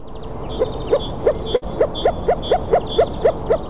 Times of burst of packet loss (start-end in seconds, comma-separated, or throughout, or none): 1.56-1.64